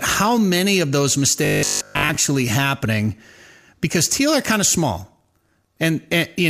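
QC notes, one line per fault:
1.45–2.17 s, robotic sound from repeated short buffers: the speech turns into a rigid, metallic buzz with a fixed pitch of 50 Hz that still loosely tracks the speech's shape. The likely cause is audio arriving too seldom, so the software kept replaying the most recent slice of sound to fill the gaps, and most of this stretch is repeats rather than new audio. A 50 Hz buzz fits a repeated buffer of about 20 ms.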